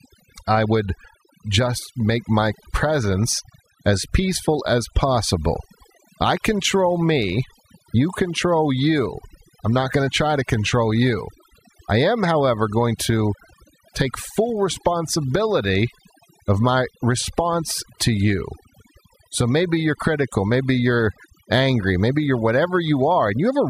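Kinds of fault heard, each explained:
Overdone noise removal: across the whole speech clip, a noise reducer pushed too hard cuts any frequency band near its noise estimate, so the background drops and breaks up into twinkling specks, unlike a gate's whole-signal on-off pumping.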